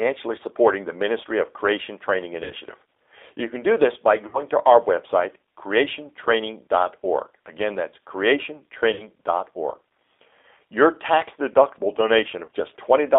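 Speech squeezed through a G.729 codec the whole way. Nothing comes through below 300 Hz or above 3.6 kHz, and the rebuilt voice has that rough, slightly synthetic edge, which fits 8 kbit/s G.729A. On top of that there's VoIP packet loss concealed by the speech codec at 2.44 to 2.53 s, 4.27 to 4.39 s (between "can do this by" and "to our website"), 8.94 to 9.07 s, and 12.45 to 12.48 s right after "tax deductible". Each time the decoder stretches the last sound into a fading buzzy tone or coloured noise over what sounds like 30 to 60 ms of missing audio, and it stays a bit weak for a moment after.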